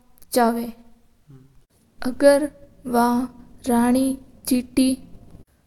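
Nothing in this speech recording stands out as a technical fault, so there's nothing here to flag.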